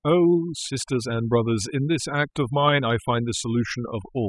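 Overdone noise removal runs through the whole clip: a noise reduction stage set too aggressively keeps cutting any frequency band that sinks toward its noise estimate, dragging quieter parts of the speech down with it. The background drops and breaks up into twinkling, warbling specks.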